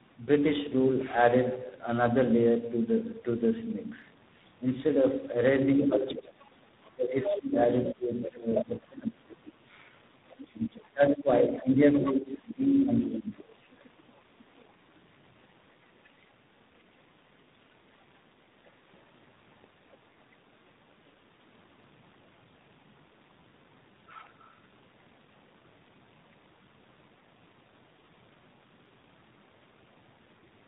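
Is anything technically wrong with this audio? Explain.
Yes. There are three problems.

Tandem speech coding runs through the whole clip. The speech sounds rough, muffled and warbly, with nothing above 3.8 kHz. It has passed through two speech coders in a row, likely an AMR-style mobile codec and then a G.726 link, each re-coding the other's damage. That compounded roughness is worse than any single narrowband codec produces.

From 5.77 to 14.7 s, the other side's voice leaks through at about 10 dB below the talker. This is likely far-end loudspeaker sound that the echo canceller failed to remove. It is not a distinct background talker.

Speech suppressed in double talk occurs from 5.85 to 9.29 s and from 10.42 to 13.76 s, for roughly two and three seconds of affected audio respectively. The talker dips by up to about 20 dB or drops out in pieces. This is likely the canceller ducking both voices during overlap. 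Unlike random dropouts, the losses coincide with the leaking second voice.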